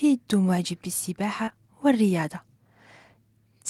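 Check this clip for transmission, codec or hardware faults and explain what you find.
There is one transmission fault, short concealed packet loss, occurring twice back to back. From 1.45 to 1.49 s and again from 1.49 to 1.53 s, about 20 ms of speech each time never arrived. The receiver extended the preceding sound to cover the gaps, heard as a brief smear.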